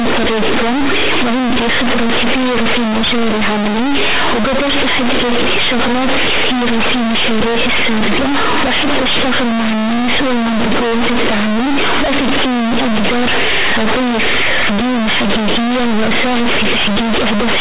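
From start to finish the speech is hit by companded audio read as linear: mu-law bytes are being played as plain 8-bit samples without expansion. Every sign change throws the output across roughly half its range, so soft passages come out as loud as strong ones, giving harsh, buzzy distortion and heavy noise in the pauses. Unlike ordinary overload clipping, that noise floor stays high even in silence.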